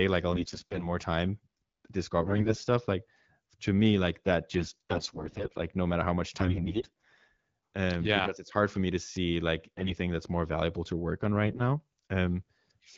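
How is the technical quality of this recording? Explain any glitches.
The recording is marred by repeated bursts of AMR bit errors, heard against wideband HD Voice coding whose light artefacts fit AMR-WB at 12.65 kbit/s. The bursts fall at 0.32–0.86 s, 2.22–2.68 s, 4.58–5.58 s, 6.37–7.20 s, 9.77–9.94 s and 11.42–11.62 s. A weak link flipped a sizeable share of the lightly protected bits in each frame, somewhere around a tenth to a fifth, while the protected core passed its check. The decoder therefore placed excitation pulses wrongly and used skewed pitch, gain and spectral values. Pitch and level hold roughly steady, but the speech turns hoarse, scratchy and gargly, worst in the 2.2 s burst.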